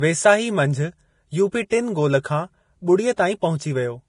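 Heavy lossy coding, likely Vorbis, runs through the whole of this speech recording. The encoder has kept very few bits, consistent with a bitrate around 30 kbps. It has removed everything above about 10.6 kHz and quantised the remaining treble so coarsely that the fine detail turns into noise of similar energy. The result is dull at the top yet hissy and grainy, with roughened tonal parts and softened consonant attacks for all 4 seconds. The same transform coding causes pre-echo at three moments. When a sharp onset lands late in a coding block, the quantisation noise meant for the loud part also spreads into the quiet moment just before it. A short hiss therefore comes before the attack and makes it sound smeared. This happens at 1.70 s, between "मंझि यूपी" and "टिनि गोल खां", with about 16 ms of spread. It happens again at 3.16 s, with about 17 ms of spread, and from 3.58 to 3.60 s, where the spread is longer at about 26 ms.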